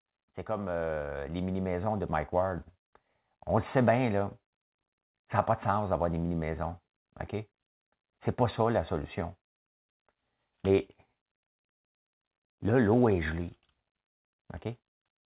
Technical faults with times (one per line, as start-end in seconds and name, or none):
0.46-2.71 automatic gain rising